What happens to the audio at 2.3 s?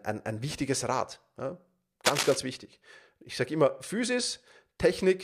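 A burst of cable scratch noise runs from 2.05 to 2.37 s, a dense, uneven rustling roughly as loud as the speech. It is likely a worn connector or cable being moved, its contact resistance fluctuating rapidly. Unlike isolated clicks or steady hiss, it is a brief clustered scrape.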